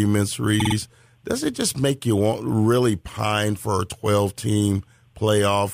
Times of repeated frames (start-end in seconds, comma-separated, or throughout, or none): 0.59-0.75